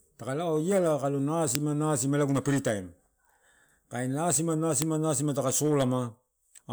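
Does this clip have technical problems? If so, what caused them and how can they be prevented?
Yes, an uninitialised buffer fault occurs twice: at 1.55 s and at 4.82 s, just before "nasima taka". Each time a 1.45 ms block, which fits a 64-sample buffer, plays leftover memory as a loud crack. Zero-fill or fully write each buffer before playback.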